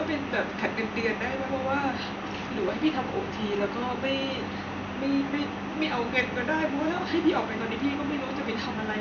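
Speech recording with no audible technical faults.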